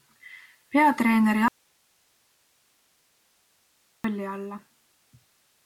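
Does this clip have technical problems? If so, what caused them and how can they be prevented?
Yes. The incoming signal was likely interrupted while the rest of the chain stayed live, causing an audio dropout to a faint residue from 1.48 to 4.04 s: the speech cuts off abruptly for about 2.56 s, leaving only hiss roughly 40 dB down. Securing connections and monitoring the input feed would prevent it.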